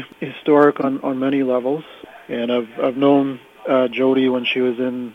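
At 0.81 to 0.86 s, a corrupt frame decoded: damaged bits across a couple of frames yield a fairly loud glitch of misplaced energy.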